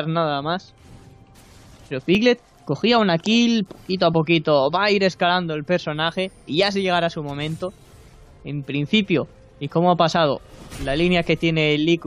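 At 2.15, 4.14, 8.14 and 10.13 s there are tiny skips in the sound. This is overlap between stream segments. The skips fall on multiples of about 2 s, which fits 2-second segments. At each join, the time stamps of adjacent segments overlap, so the player trims audio that was never duplicated. Around 15 to 18 ms of sound is lost each time. The waveform jumps across the gap.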